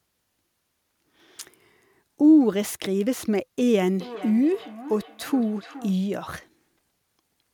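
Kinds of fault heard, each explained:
Feedback echo between two devices: one device replays another's microphone feed back into it, so the speech returns every 400 ms or so, peaking about 16 dB below speech.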